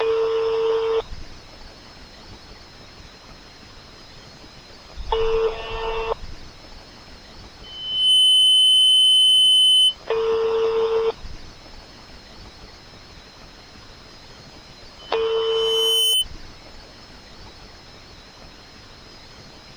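A microphone in this everyday-sound recording is picking up the loudspeaker it feeds, and at 3 kHz the loop gain rises above one, causing loudspeaker feedback squeal. A pure 3 kHz tone swells out of the sound twice. From 7.63 to 9.96 s it builds in about half a second to well above the sound itself. From 14.99 to 16.25 s it grows more slowly, over about a second, and peaks somewhat lower.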